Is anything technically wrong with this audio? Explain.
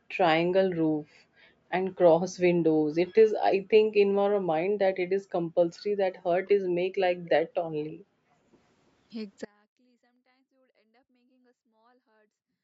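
Yes. The clip has four kinds of fault.

Background gated by the echo canceller, from 0.0 to 0.13 s and again from 7.46 to 8.23 s: while the far end's loudspeaker played, the canceller turned the microphone down by about 40 dB, so the room sound drops out. On a spectrogram the background noise floor goes dark in those spans, and the waveform flattens.

Speech suppressed in double talk, from 6.43 to 6.57 s: the speech dips by roughly 20 dB for a moment. The likely cause is the echo canceller turning down the near talker while both sides spoke at once. The waveform envelope sags briefly, and the harmonics fade on the spectrogram.

Echo leak, from 7.88 to 7.92 s: a very faint delayed copy of the speech, 334 ms behind the original, slips through. The likely cause is a far-end canceller leaving some loudspeaker pickup unremoved. The spectrogram shows a weak, smeared repeat of the earlier speech pattern.

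Audio dropout to a faint residue, from 9.45 s to the end: the speech cuts off abruptly, leaving only faint sound roughly 30 dB down. The likely cause is the signal being lost while the path stayed live. The waveform collapses to a thin trace, and the spectrogram turns nearly blank rather than fading. Across the whole clip, nothing appears above 8 kHz.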